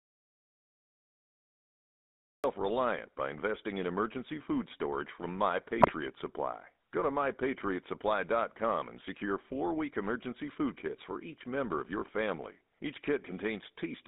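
Audio dropout to silence runs from the very start until 2.44 s: the recording opens in silence with no room tone, most likely because the input link or device was lost while silence was written. GSM full-rate codec damage is plainly audible throughout the speech. The sound is confined to roughly 200 Hz to 3.7 kHz and has a buzzy, gravelly roughness from pulse-driven vocal-tract coding, which fits 13 kbps full-rate GSM. GSM bit errors strike from 5.79 to 5.92 s, where corrupted filter, pitch and gain values burst into a brief squawking, gargling disturbance, a span that fits about seven damaged frames.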